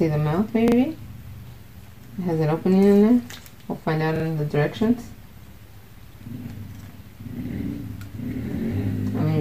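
A brief stutter appears at 0.68 s and again at 4.16 s, each lasting about 0.08 s. The same short fragment sounds three times in a row with a hard join at each restart. This is a repeated buffer. Fresh audio did not reach the output in time, so the device replayed its last block twice more. The repeat length fits a 40 ms buffer, and essentially no audio is dropped, so the sound simply resumes afterward.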